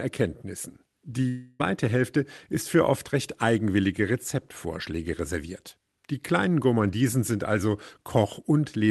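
Speech with a long network dropout from 1.28 to 1.61 s, likely from packets lost on the call path. For about 0.31 s the receiver extends the last sound as a fading buzz rather than silence, and the audio resumes without the missing stretch. The band stops near 12 kHz, which fits Opus at about 32 kbps.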